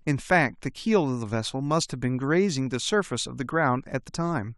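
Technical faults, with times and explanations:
4.08 s, compressed frames skipped: about 20 ms of the speech goes missing, which fits a single dropped frame of roughly 23 ms. The audio jumps ahead by the length of the missing frame. The waveform shows a discontinuity, and the spectrogram shows a narrow vertical line.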